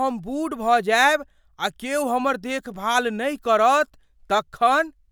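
No technical fault can be heard anywhere in the signal of this speech recording.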